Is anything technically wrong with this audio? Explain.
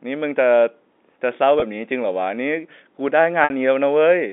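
Yes, there is packet loss with pitch repetition. Audio drops out at 1.60 to 1.62 s (20 ms, which fits a single lost packet) and at 3.44 to 3.50 s (60 ms, which points to about three consecutive packets). The receiver fills each gap by repeating the last pitch period. The first gap sounds like a brief buzzy hold. The second repeats the period and fades it out over about 50 ms, sinking toward silence before the sound returns with a short cross-fade. On a waveform, identical cycles repeat with a shrinking envelope. On a spectrogram, the harmonics turn into flat, frozen stripes and then fade, all within the narrow G.711 telephone band.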